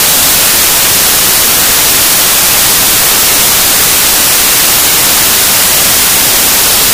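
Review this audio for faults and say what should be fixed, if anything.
The sample reader is assembling each sample from the wrong bytes, whether from a one-byte offset, a swapped byte order or a mismatched alignment, so the rapidly changing low-order bits land in the most significant position. Across the whole clip this turns the audio into loud, harsh broadband noise, close to white on loud sounds. The fix is to decode with the correct byte order and alignment. To prevent it, the reader should take endianness, sample width and frame alignment from the file header and verify them before decoding.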